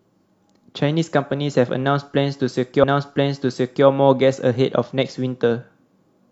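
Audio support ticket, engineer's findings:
Stream segment repeated, 2.79–3.81 s. Speech jumps back and replays about 1.02 s of material, small blip audible at the jump point. Probable component: player buffer/segment queue. Same media segment fetched or queued twice, so the decoder receives identical content back to back and plays it again. Clip runs roughly a second longer than the source as a result. Check segment sequence handling and duplicate-request logic in the fetch loop.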